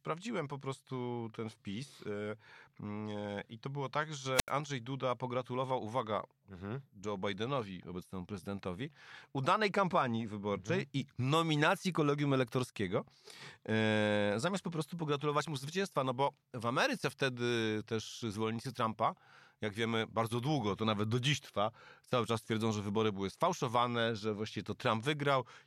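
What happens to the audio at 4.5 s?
Just after "y to było tak", a wireless microphone squelch dropout runs from 4.33 to 4.52 s. The FM radio link fades, hiss rises briefly, then the receiver's squelch mutes the output for about 80 ms, leaving a near-silent hole before the speech resumes.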